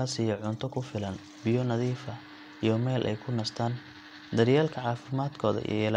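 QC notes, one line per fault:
No fault found in the speech.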